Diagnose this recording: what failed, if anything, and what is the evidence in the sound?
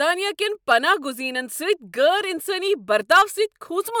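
Nothing in the chain appears to have failed: the speech signal arrives continuous and intact, with no audible disturbance traceable to the wiring, conversion, buffering, codec, network, storage or playback stages.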